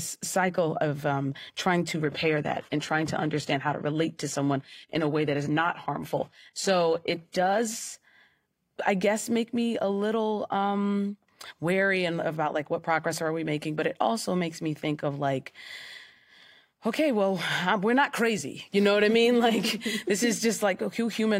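From 1.94 s to 7.94 s the speech abruptly turns thin and swirly, with nothing above 14.9 kHz, then snaps back without a gap. This is an adaptive stream at a lower bitrate, with the sound pointing to a drop from about 96 to 20 kbit/s.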